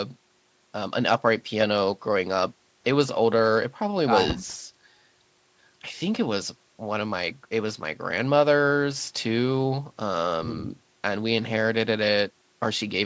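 No faults heard in this speech; the call microphone processing trims the lowest bass and leaves nothing above 8 kHz, as expected for that path.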